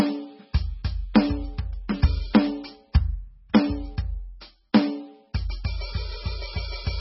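The whole music clip sounds watery and swirly, with nothing above 5.6 kHz. This is likely heavy MP3 compression, consistent with a bitrate around 16 kbps.

At 1.14 s and 4.73 s, a short hiss precedes an attack. This pre-echo spreads coarse block noise about 14 and 13 ms ahead, smearing the attack.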